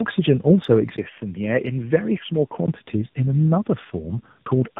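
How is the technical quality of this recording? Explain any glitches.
The quality is poor throughout. Tandem speech coding runs across the whole clip. The speech sounds rough, muffled and warbly, with nothing above 3.8 kHz. It was coded, decoded and coded again, which fits two AMR-NB stages. Each stage compounds the previous one's damage.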